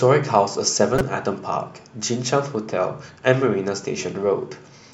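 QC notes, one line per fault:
0.95–1.01 s, corrupt frame decoded: a burst of about 58 ms in the speech where a short run of compressed frames, roughly three, arrived with flipped bits and was decoded as if intact. Misread codes and wrong gain values put energy at frequencies that do not belong there, so the burst comes through as a harsh chirp or noise blip peaking near -5 dBFS, lasting only as long as the damaged frames.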